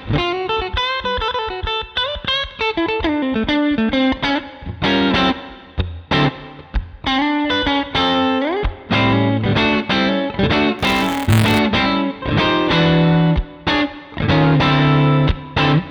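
Buffer tearing runs from 10.79 to 11.59 s. The writing side and the reading side of the output ring buffer have drifted until they cross within every period, so a small slice of each buffer, only a few percent, still holds audio from roughly 20 ms earlier, butted against the current material with hard joins. Those repeated seams produce a rattly, robotic buzz at 172 Hz, which fits a 256-sample buffer, and it rides on the sound only while signal is present.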